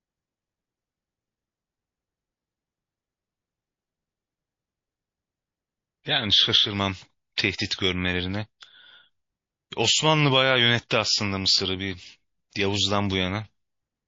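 MP3 compression runs through the whole speech clip, plainly audible as a watery, swirling texture on sibilants. This is likely a starved encoder cutting the treble and dropping weak frequency lines, which fits a bitrate around 32 kbps.

Pre-echo appears from 12.50 to 12.53 s: a brief hiss, about 16 dB above its surroundings, spreads over roughly 34 ms ahead of a sharp onset, softening the attack. The spread points to long transform blocks of about 72 ms, with no switch to short blocks.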